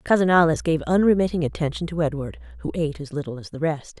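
A ground loop or nearby transformer lets the 60 Hz power line leak into the signal from 0.33 s to 3.02 s, producing mains hum: a steady low drone with some low harmonics, sitting about 20 dB below the speech throughout that span.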